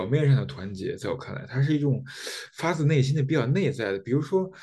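On listening, nothing in the recording stood out as a technical problem.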